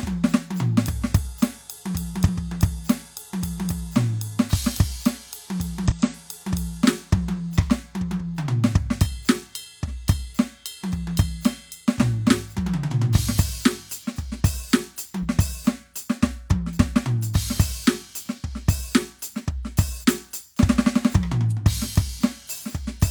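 Damaged data in a compressed stream hits this music clip at 2.23–2.29 s, 5.86–5.92 s and 15.19–15.26 s, each a brief glitch of about 60 ms. Corrupted bytes make the decoder misread frames and lose sync until it finds the next valid frame header.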